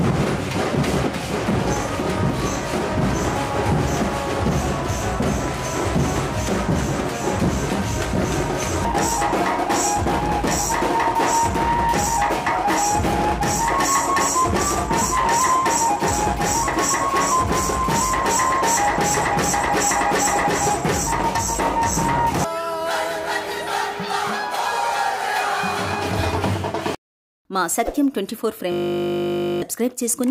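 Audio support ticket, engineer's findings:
Audio freezes into a system hang loop at 28.72 s, running to 29.62 s. A single 20 ms slice repeats exactly, 45 times, giving a steady 50 Hz buzz. Probable component: driver or host stall while the audio hardware keeps replaying its ring buffer. Short loop length fits a small buffer. Around a second of real audio lost. Waveform: identical 20 ms cycles tiled end to end. Spectrogram: flat harmonic comb at 50 Hz spacing, no time variation, hard edges at both ends.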